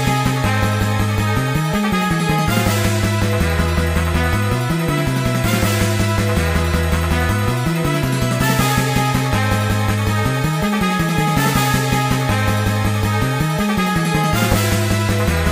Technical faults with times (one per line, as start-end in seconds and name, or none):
none